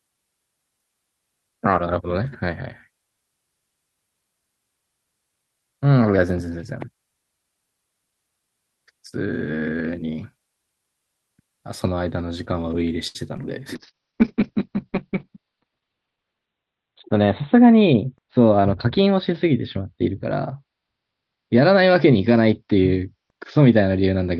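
At 13.07 to 13.17 s a short stall from a late packet holds the voice for 73 ms. The buffer ran dry, so a frozen, slightly buzzy sound appears as flat repeated harmonics on a spectrogram.

At 13.37 to 13.40 s and 13.42 to 13.45 s, short concealed packet loss fills two 20 ms gaps with extrapolated sound. Each shows as a brief smeared patch.

From 13.76 s to the end, a call bitrate drop from 32 to 7 kbps narrows the bandwidth from 20 kHz to 4 kHz. Speech turns muffled and watery, and the spectrogram goes blank above 4 kHz. The lowest rate lasts 2.68 s.

At 15.14 to 15.62 s, a jitter buffer speed-up plays speech about 10% faster at the same pitch, cutting about 50 ms. It sounds hurried, and the waveform shows slightly compressed syllable spacing.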